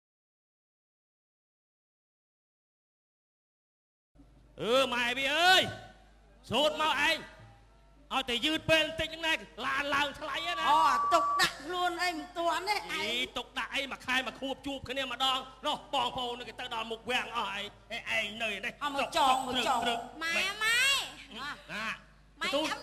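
From 10.27 to 11.55 s a loudspeaker feedback squeal rises at 1.2 kHz, as a microphone picks up its own loudspeaker and loop gain exceeds one there. Unlike a steady interfering tone, it swells over roughly half a second to some 5 dB above the sound.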